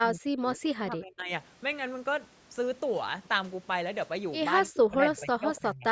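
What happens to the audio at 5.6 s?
At 5.6 s the speech is caught in speech suppressed in double talk, running from 4.69 to 5.86 s: it dips by up to about 25 dB and breaks up, likely because an echo canceller mistook it for loudspeaker echo. The waveform thins and gaps; the spectrogram fades.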